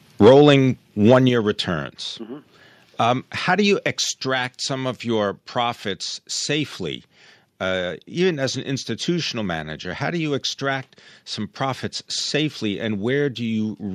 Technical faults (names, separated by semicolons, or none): microphone overload; microphone volume stepped down